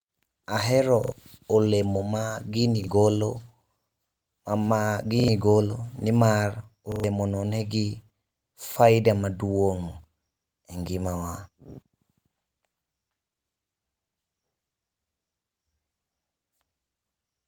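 Speech, with five repeated buffer faults: new audio failed to arrive in time, so the playback device replayed its last chunk, and the repeat length fits a 40 ms buffer. Each gap becomes a hard-edged stutter, at 1.04 s before "olemo ma gini golo", 2.84 s, 5.2 s before "golo nimar", 6.92 s between "golo nimar" and "no nigi" (three repeats, the longest), and 8.72 s. The real audio is lost under each one, from a few hundredths of a second to about a tenth.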